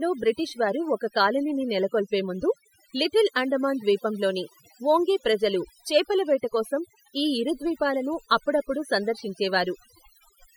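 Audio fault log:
throughout, overdone noise removal: a lowered background breaking up into twinkling specks, because aggressive noise reduction switched off frequency bands near its noise estimate, taking quiet speech detail with them.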